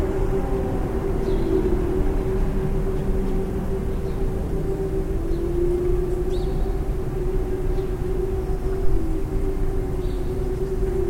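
At 8.85 s a phantom power thump breaks in. It is a deep, low thud that peaks at about -9 dBFS and dies away in roughly 51 ms. Its tail is gone by 9.07 s. The cause is a supply being switched on a live input. The sudden voltage step passes through the coupling capacitors and reaches the signal path as a single heavy pulse.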